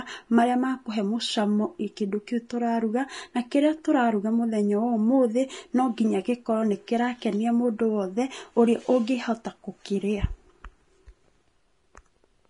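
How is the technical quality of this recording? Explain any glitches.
The technical quality is poor: plainly audible codec damage runs through the whole speech recording. Throughout, the sound is hissy and grainy, with roughened tones and softened consonant attacks, most likely from Vorbis compression at a low bitrate, consistent with around 32 kbps. At that setting the encoder drops everything above about 10.6 kHz and quantises the remaining treble so coarsely that fine detail turns into noise of similar energy. A spectrogram would show a hard ceiling at 10.6 kHz and speckled, smeared upper bands beneath it.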